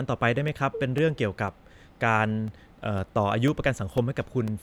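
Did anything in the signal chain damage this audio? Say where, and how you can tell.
Yes, at the driver or buffer stage: periodic USB or driver dropouts. From 0.48 s to 4.48 s, a tick sounds every 0.5 s as roughly 2 ms of speech drops to silence while something stalls the bus. The clockwork spacing sets it apart from random crackle.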